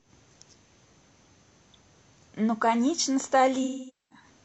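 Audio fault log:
3.63–4.26 s, AAC frame loss with concealment: a run of consecutive AAC frames, about 470 ms of audio, which fits roughly eleven frames, never reached the decoder. It repeated the last good spectrum with scrambled signs or interpolated energy, so the speech smears, decays toward silence, then fades back.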